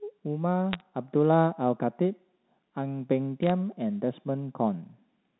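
At 0.73 to 0.81 s and again at 3.43 to 3.50 s, short bursts of bit errors on a digital phone line crackle over the speech. Flipped bits on the G.711 mu-law line each corrupt a single sample, and hits on the sign or upper bits jump into sharp ticks, at an error rate of a few tenths of a percent. Unlike packet loss, nothing drops out or smears. The speech carries on intact underneath the isolated clicks.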